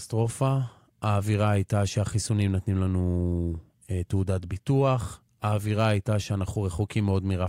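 Nothing in this speech recording stood out as a technical problem on listening.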